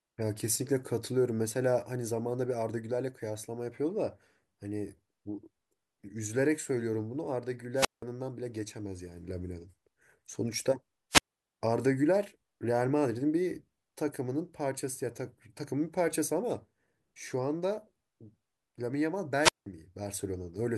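Speech recorded over a wireless microphone suffers squelch dropouts at 7.75–8.03, 11.10–11.52 and 19.40–19.66 s: the fading radio signal trips the receiver's squelch, so a burst of hiss gives way to silences of about 176, 340 and 179 ms.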